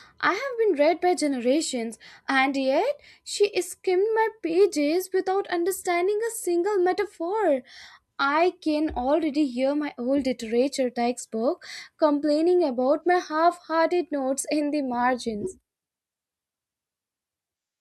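Nothing in this speech recording stands out as a technical fault, so there's nothing here to point to.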